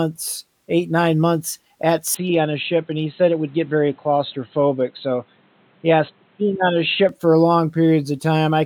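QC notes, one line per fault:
2.14 to 7.09 s, input switched to a poorer device: the recording likely moved to a different, lower-grade microphone or a headset's call profile for this stretch, then returned to the original input. The speech turns dull and boxy because the replacement passes nothing above about 4.1 kHz, and it brings its own faint background noise, roughly 35 dB below the speech. There is no gap at either switch and the loudness stays level, so only the tone and noise change.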